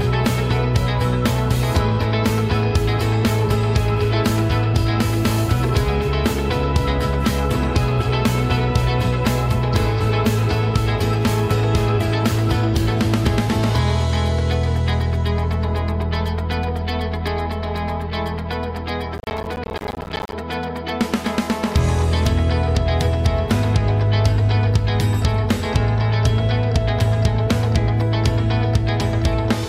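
From 19.18 to 20.33 s a processor overload crackle tears through the sound: buffers of around 10 ms miss their deadlines dozens of times, each leaving a hard-edged silent gap. Unlike a single dropout, it is a dense gritty burst that stops when the load passes.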